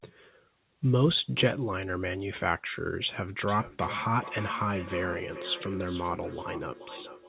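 Speech carried over a call link that stops at 4 kHz, with feedback echo between two devices from 3.48 s to the end: words return at a regular interval of roughly 0.4 s, up to about 14 dB below the speech, as a nearby second device replays and recaptures the sound. The fixed interval sets it apart from ordinary room reverberation, which smears sound continuously.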